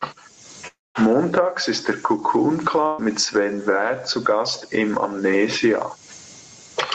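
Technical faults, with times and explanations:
Throughout: gain pumping. Loud and soft parts are pulled closer in level, a swing of roughly 25 dB, likely from gain set far too high and a fast limiter clamping it. The waveform looks flattened.
0.67 to 0.98 s: long network dropout. The last sound carries on as a fading buzz or hiss, then about 0.21 s of silence before the speech resumes, with roughly 0.28 s lost. On a spectrogram the smeared tail gives way to a blank band.
2.87 to 3.01 s: burst of packet loss. About 0.12 s of audio is missing. The receiver held the last sound as a buzz or hiss that decays without reaching silence. On a spectrogram the last sound stretches into a flat, dimming smear before the speech picks up further on.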